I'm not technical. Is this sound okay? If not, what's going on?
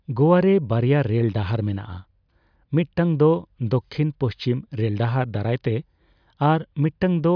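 Yes, nothing in this recording points to a technical problem with how the sound was captured or carried.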